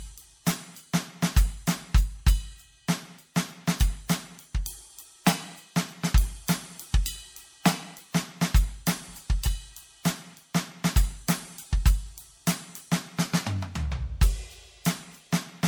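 A music clip with generation loss running the whole way through. It has that swirly, smeared, hollow quality, and the attacks blur more than a single lossy encode would explain. That points to the audio likely having gone through an MP3 decode and re-encode cycle around ten times, each pass requantising on a shifted frame grid so the noise and spectral holes stack up. It fits a 96 kbit/s chain, with nothing above 20.1 kHz.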